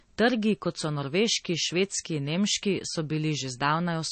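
From start to end, the speech has nothing above 8.4 kHz. It sounds dull and swirly. This is likely low-bitrate audio saved at a high bitrate. A first MP3 pass near 32 kbit/s removed detail. The later high-bitrate copy cannot restore it.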